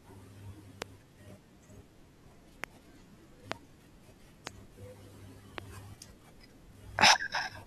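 Sharp single pops, each about 20 ms long and roughly 20 to 25 dB above the speech, hit at 0.82–0.84, 2.64–2.66, 3.52–3.54, 4.47–4.49, 5.58–5.60 and 7.02–7.04 s while the talking continues beneath. These loud pops are likely voltage spikes from a switch, static or driver glitch.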